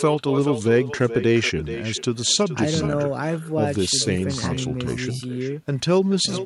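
From the start to the end of the clip, every phrase returns as a quieter copy roughly 0.4 s behind it. This is echo with no canceller. The far end's loudspeaker feeds its microphone, and nothing strips that out. The copy sits about 12 dB down, and thin.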